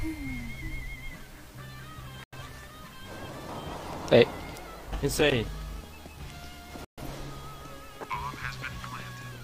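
At 2.24 s the sound snaps off for a moment and comes back at 2.37 s, and the same thing happens again from 6.85 to 7.01 s. That's a digital broadcast dropout: the receiver lost good frames and muted until clean ones arrived, fading down in about 3 ms so each hole starts almost as a hard cut. The missing chunks fit roughly two and three lost frames, and whatever aired in those gaps is simply gone.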